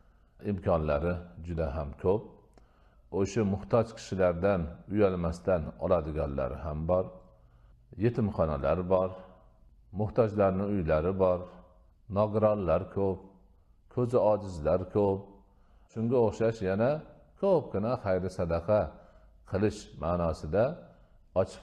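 Nothing is technically wrong with this audio.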